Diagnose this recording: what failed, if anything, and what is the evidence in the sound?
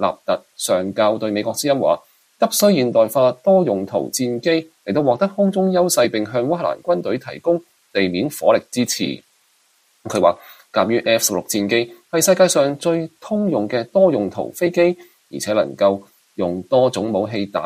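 Nothing stood out on listening to this recording; no stage in the chain showed any audible sign of failure.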